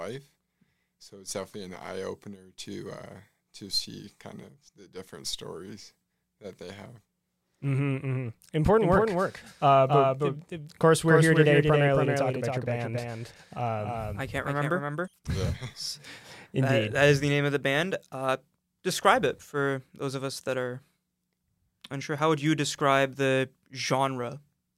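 From 8.8 s to 15.1 s the audio is doubled: a second, full-band copy trails about a third of a second behind, somewhat quieter, with no decay, cutting in and out abruptly. This doubled audio track likely comes from a slower second capture path or misaligned edit.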